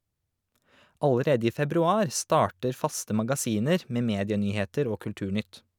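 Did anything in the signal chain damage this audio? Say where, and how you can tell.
No, nothing in the signal chain damaged this audio.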